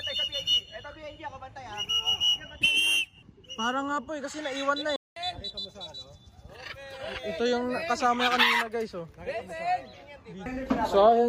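At 4.96 s the sound cuts out mid-flow and stays silent for about 200 ms, until 5.16 s, before playback resumes. This is a playback stall; the likely cause is the player running short of buffered data or its output thread being blocked.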